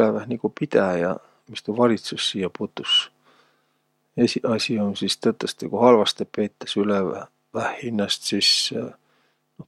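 No technical faults can be heard in the speech, so there are none to describe in time order.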